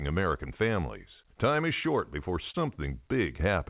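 At 2.51 s, just after "is short before", short concealed packet loss: about 30 ms went missing and was patched by extending the preceding sound, heard as a brief smear.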